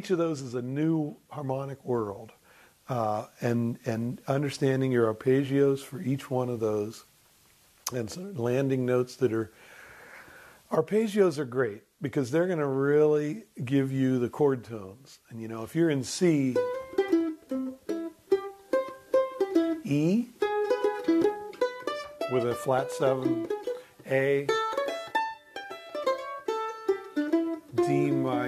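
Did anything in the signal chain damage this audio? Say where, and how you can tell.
No, nothing in the signal chain audibly damaged this audio; the signal holds steady throughout, with no stage leaving a mark on it.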